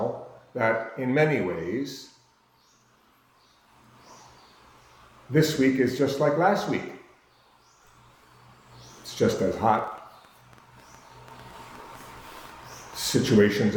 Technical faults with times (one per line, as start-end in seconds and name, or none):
9.75-13.71 train of clicks